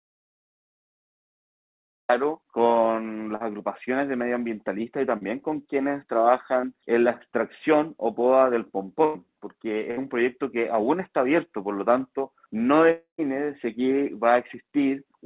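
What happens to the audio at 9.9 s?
At 9.91 s a burst of packet loss cuts in, lasting until 9.99 s. A short run of audio never arrived in time to be played. The receiver covered the hole by extending the last sound it had, for about 62 ms, and letting it fade. That smear gives way to a jump, because about 60 ms of the original is simply gone. The sound resumes further along, already band-limited to 4 kHz by the G.711 call path.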